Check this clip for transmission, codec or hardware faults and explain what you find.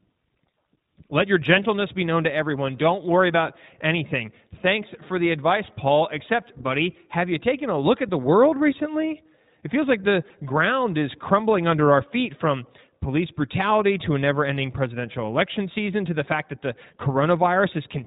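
One codec fault runs through the whole speech recording: iLBC codec coding. From start to finish nothing above 4 kHz comes through, and the voice has a plainly audible rough, slightly synthetic grain. iLBC codes each frame's excitation independently of the previous frame, and the texture here fits its 20 ms mode at 15.2 kbps. That frame-by-frame roughness is what separates it from simple telephone band-limiting, which dulls the top end but leaves the voice smooth.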